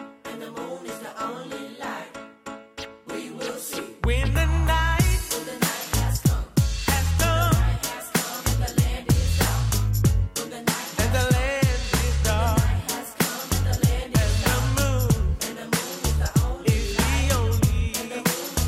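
Nothing stood out as a technical fault on listening.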